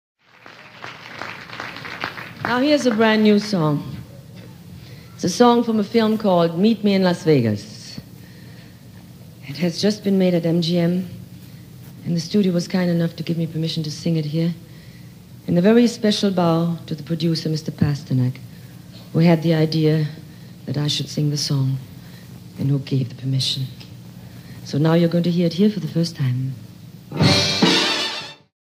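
Nothing is technically wrong with this audio; the only change in level is an ordinary smooth fade-out from about 27 s to 28.54 s.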